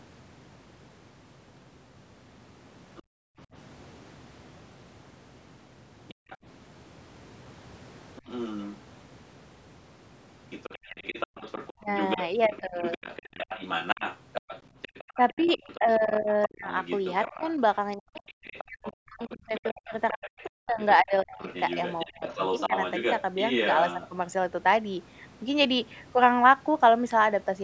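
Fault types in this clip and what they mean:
other side's voice leaking through: a fainter second voice, likely loudspeaker echo the canceller missed, runs about 10 dB under the talker from 10.5 to 24.09 s, showing as overlapping faint harmonic stripes.
background gated by the echo canceller: room sound plunges about 39 dB at 3.03–3.38 s and about 37 dB at 6.14–6.29 s, leaving flat waveform gaps and blank spectrogram columns.
speech suppressed in double talk: during overlap, likely the canceller mistaking the talker for echo, the voice dips as much as 40 dB between 15.16 and 22.71 s, giving notched waveform envelopes.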